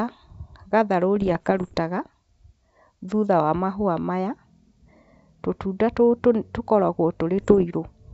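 Bit errors on an ADPCM link, at roughly half a percent, corrupt the speech from 1.16 to 1.79 s and again from 7.38 to 7.66 s. Each flipped bit throws the decoder's step size and predictor off, so the sound breaks into pops and rough, briefly jumping bursts.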